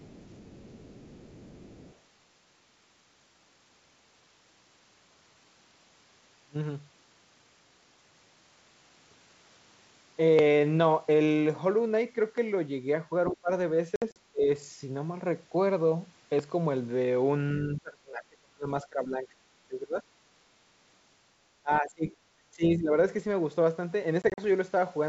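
Speech carried over a G.722 wideband telephone link, with a full upper band and little coding hiss, shows three faults. The other side's voice is leaking through at 0.0 to 1.98 s, a faint second voice roughly 25 dB below the talker. It returns briefly and much louder at 13.27 to 13.35 s, about 10 dB down. The likely cause is a loudspeaker-to-microphone path the echo canceller has not fully cancelled, so residual far-end speech rides along with the near-end signal. Speech is suppressed in double talk at 13.3 to 13.5 s, 14.32 to 14.48 s, 17.59 to 20.04 s, 21.63 to 22.07 s and 22.56 to 22.92 s. The talker's level drops sharply, by about 25 to 30 dB at the deepest points and about 15 dB in the last instance, and the longest dip lasts around two seconds. This is likely the canceller failing to separate the talker from the echo while both sides speak, and attenuating everything. Packet loss on an ADPCM call appears at 13.96 to 14.17 s and 24.22 to 24.40 s. 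In the first burst, 100 ms of audio goes missing across 200 ms, with the longest hole 60 ms. In the second, 80 ms goes missing across 160 ms, with the longest hole 40 ms. Each gap is a hard-edged silence. Afterwards the decoder's predictor and step size no longer match the sender's, so the speech comes back slightly distorted before settling.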